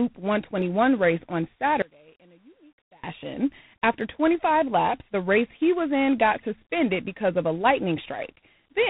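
Right through the clip there's tandem speech coding: two speech coders in a row, the second re-coding the first's damage, so it's rough and nothing above 3.9 kHz. Then from 1.82 to 3.04 s, just after "race on", the sound drops about 30 dB to a faint ghost, likely one channel inverted cancelling in mono.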